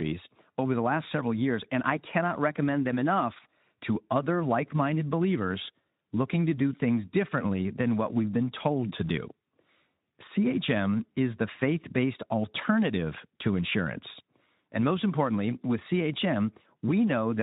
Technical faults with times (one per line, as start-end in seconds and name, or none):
none